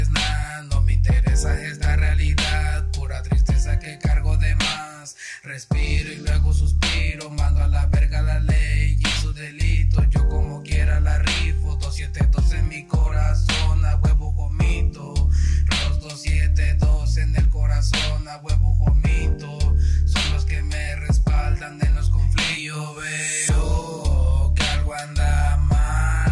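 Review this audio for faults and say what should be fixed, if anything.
No faults to report; nothing here needs fixing.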